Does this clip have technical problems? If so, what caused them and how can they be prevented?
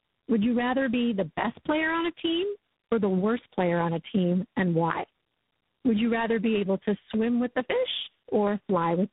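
Yes. Throughout the clip the speech sounds rough, muffled and warbly, with nothing above about 3.8 kHz. This is tandem speech coding. The call passed through AMR-NB at 5.9 kbit/s, then G.711 A-law, then G.726 at 24 kbit/s, so it was decoded and re-encoded at each handover. G.726 had to code the already damaged AMR-NB output, and the two coders' errors stacked. To prevent it, keep one codec end to end, using transcoder-free operation where the network supports it.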